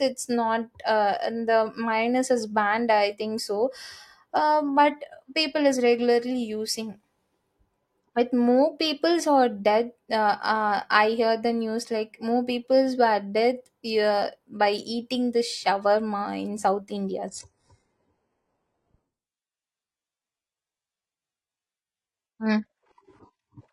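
At 17.28 s the speech abruptly turns thinner and more synthetic, with swirly codec artefacts and nothing above 14.9 kHz, and it stays that way to the end at 23.73 s, with no gap at the switch. This is an adaptive stream at a lower bitrate: the player dropped to a cheaper version when the connection slowed, and the sound points to a move from high-rate AAC-LC to HE-AAC at around 12 kbit/s.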